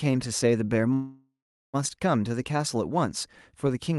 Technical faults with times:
0.93-1.76 call audio freeze

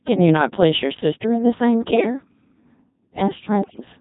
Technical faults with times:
0.00-4.00 Codec 2 vocoder
1.93-2.13 bit errors on digital voice radio
3.63-3.85 bit errors on digital voice radio

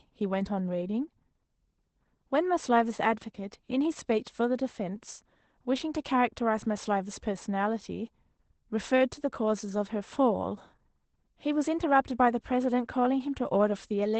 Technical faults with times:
0.00-14.19 Opus voice compression

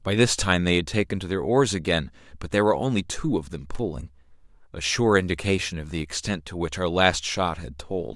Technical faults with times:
3.75-3.79 loose connector crackle

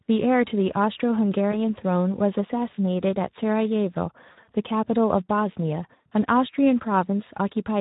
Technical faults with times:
0.00-7.81 Speex codec
1.51-1.57 VoIP packet loss concealed by the speech codec
4.31-4.49 VoIP packet loss concealed by the speech codec
5.95-6.12 VoIP packet loss concealed by the speech codec

